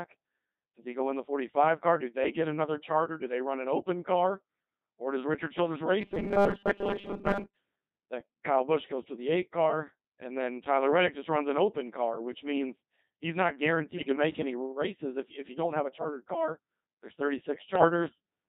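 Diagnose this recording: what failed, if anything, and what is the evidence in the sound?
Robotic, buzzy speech runs throughout the recording. This is the Codec 2 vocoder at 2.4 kbit/s, a codec stage that resynthesises the voice from pitch, voicing and envelope rather than keeping the waveform.

From 6.00 to 7.57 s the voice turns into a rigid, metallic buzz near 200 Hz. That is likely robotic sound from repeated short buffers at the driver or buffer stage: 5 ms chunks are replayed, replacing most of the real audio.

Between "which means he's not" and "make any races if", from 13.96 to 14.16 s, the voice jumps and warbles. This points to bit errors on digital voice radio, with a few percent of flipped bits corrupting several vocoder frames.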